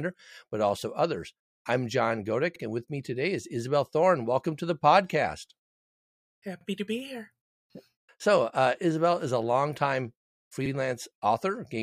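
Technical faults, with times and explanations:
2.56–2.61 s, 6.61–6.66 s, 10.66–10.71 s (before "and with me today", after "is a longtime"): overlapping chunks. Every 4 s, the next chunk starts 50 ms early, so that slice replays as a stutter.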